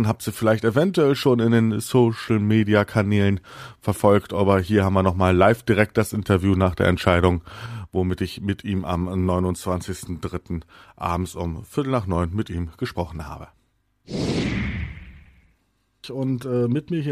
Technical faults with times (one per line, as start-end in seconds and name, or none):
7.66-17.12 sudden gain jump